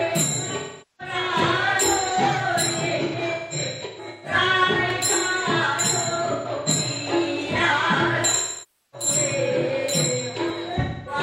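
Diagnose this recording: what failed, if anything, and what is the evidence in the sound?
The codec stage failed, through AAC frame loss with concealment. From 0.56 to 1.14 s the sound smears and sinks toward silence before fading back. From 8.31 to 9.08 s the same decay and recovery recur. Between 2.87 and 4.34 s, and again from 6.15 to 6.69 s, the gaps are scattered. Each run is up to about 150 ms, heard as noisy, phasey patches. A final patch runs from 10.80 to 11.21 s. The decoder is repeating the last good spectrum with scrambled phase, then fading it.

Clock drift buffer slips are the likely cause of a regular click. It recurs every 2.81 s, from 2.09 to 10.50 s, roughly four times. Each click fits a jump of around 30 samples. Two clocks disagree by something like 300 ppm. The buffer between them slowly drifts until it must drop or repeat a block. That points to the driver or buffer stage, not the codec.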